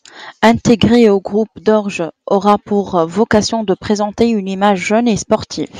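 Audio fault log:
0.44–1.07 s, 2.35–2.54 s, 2.98–3.38 s: hard clipping. Peaks exceed the limit by about 5, 4 and 3 dB. Flattened tops add high harmonics, heard as crackle before "au groupe".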